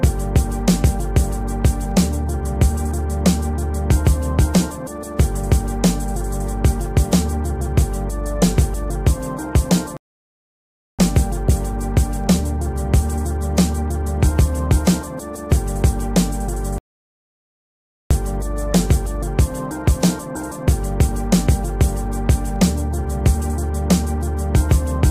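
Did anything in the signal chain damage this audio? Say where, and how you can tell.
Yes, two playback stalls: silence at 9.97–10.99 s and 16.78–18.11 s, blank gaps on spectrogram and flat waveform, likely the player starving for data.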